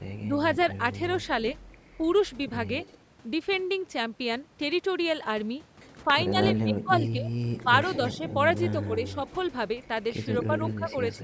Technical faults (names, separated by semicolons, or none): speech suppressed in double talk; echo leak